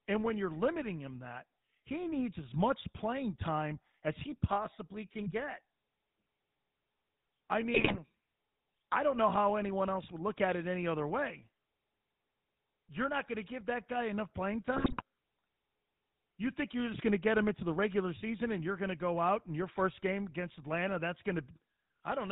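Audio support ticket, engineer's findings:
GSM full-rate codec, whole clip: buzzy, gravelly speech, nothing above 4 kHz. Pulse-driven vocal-tract model with decimated excitation, consistent with 13 kbps GSM.

GSM bit errors, 7.74–7.99 s and 14.76–15.02 s (after "that guy enough playing"): squawks, pops, gargling. Corrupted filter, pitch and gain parameters distorting decoded frames.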